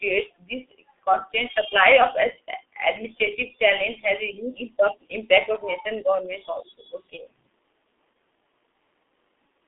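Throughout, the speech sounds muffled and hoarse, with smeared consonants and nothing above about 3.7 kHz. That is the G.723.1 codec at work: a narrow 300 Hz to 3.6 kHz telephone band and heavy coding damage, consistent with its 6.3 kbit/s mode and long 30 ms frames.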